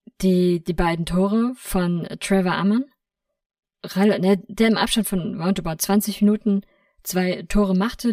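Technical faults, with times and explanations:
Throughout: channel delay (comb filtering). One channel arrives about 5 ms late, so the mono sum notches evenly spaced frequencies from around 100 Hz and sounds hollow.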